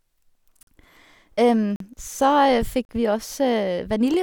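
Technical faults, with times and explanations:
0.63–0.67 s, 1.76–1.80 s and 2.85–2.89 s: block of digital silence. Processing likely failed to fill its output buffer in time, so 43, 43 and 41 ms stretches became zeros; the first two fit a 2048-sample buffer. Each cut and return is unfaded, leaving short holes in the speech.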